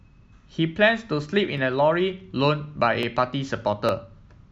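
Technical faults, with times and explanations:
1.58, 3.03 and 3.89 s, dropped samples: three single sharp clicks in the speech, each a thin vertical line on the spectrogram. These are likely dropped samples, where well under a millisecond of the stream goes missing and the waveform jumps straight to a later value.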